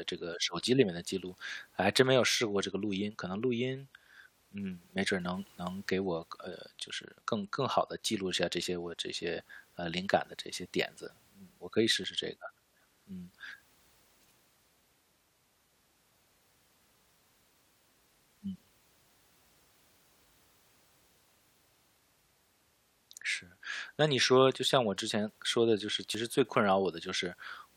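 Dropped buffers (overrun) at 9.40, 12.04 and 26.15 s: each has the speech jumping ahead, skipping about 10 ms at the first and 20 ms at the others. The likely cause is samples not being read before the hardware overwrote them, leaving the two sides spliced directly together.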